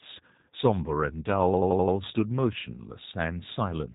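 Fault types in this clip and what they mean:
G.729 codec: The speech is rebuilt from a vocal tract filter, pitch prediction and a few pulses at about 8 kbit/s. Nothing above 4 kHz survives. It sounds plainly rough and synthetic.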